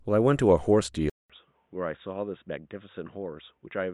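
Input switched to a poorer device at 1.10 s, lasting to the end: after a 200 ms gap the speech loses everything above 3.8 kHz, turns dull and boxy, drops by about 10 dB and gains faint new background noise, likely from another microphone or a headset's call profile.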